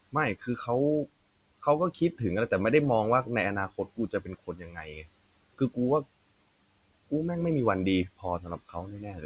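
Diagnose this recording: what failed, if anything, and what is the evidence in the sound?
Call processing: speech cut by the noise suppressor at 0.36–0.68, 1.94–2.20, 3.69–5.25, 5.54–5.77 and 8.17 s to the end. Quiet speech is misjudged as noise and dips by up to about 22 dB. Unlike packet loss, nothing falls silent or repeats.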